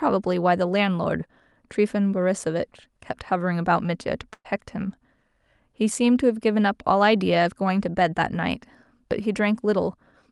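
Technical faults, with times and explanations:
4.33 to 4.47 s, burst of packet loss: a smeared, fading tail, then 50 ms of silence, as the receiver stretched the last sound over 120 ms of lost audio.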